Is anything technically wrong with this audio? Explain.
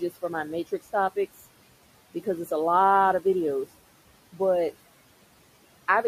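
Yes. Noise suppressor artifacts run through the whole speech clip: the processor pulls down bands it judges to be steady noise, by about 17 dB, so the room noise, sitting about 20 dB below speech, dips in pauses and swells under talking. Unlike a gate's abrupt open-close, this varies per band.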